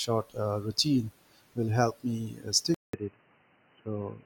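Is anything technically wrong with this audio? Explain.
Yes. From 2.74 s to the end, right after "will help me uh", the input likely switched to a poorer device. A 190 ms gap marks the switch, then the speech turns dull and boxy with nothing above 3 kHz, a new faint noise floor about 40 dB down, and unchanged level.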